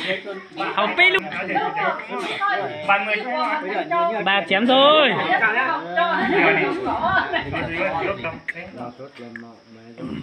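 The audio has two compressed frames skipped faults, where the stream jumps forward because missing or rejected frames were never decoded. At 1.19 s about half a second vanishes, and at 8.25 s about a fifth of a second, consistent with losing around five and two frames of roughly 93 ms each. A spectrogram shows an abrupt content discontinuity, and the waveform shows an envelope jump.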